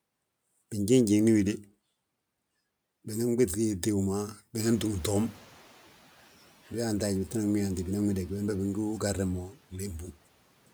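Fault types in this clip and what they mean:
Noise suppressor catching up: The room noise jumps by about 20 dB around 4.5 s, and the suppressor's estimate of the background lags behind. From 4.59 s the louder noise passes with little reduction, then sinks by about 6 dB as the estimate adapts over 1.09 s, settling near 5.68 s. On a spectrogram the broadband floor steps up sharply, then fades to a lower, steady level. In the waveform, the pauses fill with noise that then shrinks over that second.
Speech cut by the noise suppressor: Between 9.48 and 10.16 s the suppressor mistakes softer parts of the speech for background and turns them down with the noise. The deepest drop is about 13 dB, and around 0.4 s in total is affected, leaving those parts sounding swallowed or faint. A spectrogram shows patches of speech energy, especially weaker fine detail, dimming toward the noise floor. The waveform envelope dips abruptly at those spots.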